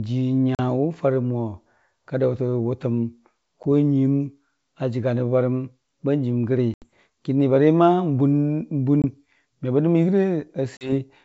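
At 0.55, 3.63, 6.74, 9.02 and 10.77 s you get hard-edged silent holes of 40, 10, 80, 20 and 40 ms: packet loss on an ADPCM call. The decoder's predictor drifts from the sender's, so each restart comes back slightly distorted, then settles.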